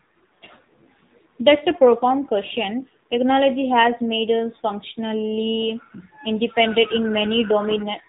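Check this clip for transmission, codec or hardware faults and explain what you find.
One fault runs through the whole recording: AMR narrowband mobile codec damage, plainly audible from start to finish. AMR-NB models the vocal tract and drives it with a few pulses per 5 ms subframe inside 20 ms frames, and its narrowband sampling leaves nothing above 4 kHz. The speech therefore sounds muffled and telephone-like, with a buzzy, synthetic edge to the voice that points to a low mode, around 7.4 kbps, where the pulse excitation is too sparse.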